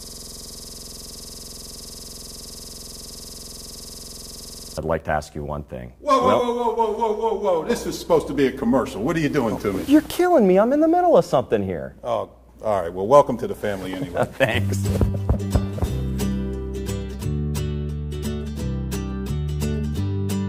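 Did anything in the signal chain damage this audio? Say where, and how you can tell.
Yes. A system hang loop at the driver or buffer stage runs from the start of the clip, already under way at 0.0 s, until 4.78 s. The same 46.44 ms fragment repeats exactly about 102 times at 21.5 Hz, a length that fits a 2048-sample ring buffer that the hardware kept replaying while the system stalled. On the waveform, identical blocks tile end to end. A spectrogram shows vertical stripes every 46 ms and harmonic lines spaced 21.5 Hz apart.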